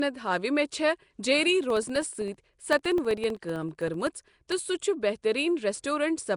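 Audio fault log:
throughout: Nellymoser compression likely; rough hissy halo and smeared, underwater tone from noise-filled empty bands, nothing above 10.6 kHz, which fits a codec running near 44 kbps.
1.64–4.58 s: periodic USB or driver dropouts; regular ticks every 64 ms where about 1 ms of audio drops to silence, audible only while sound is present.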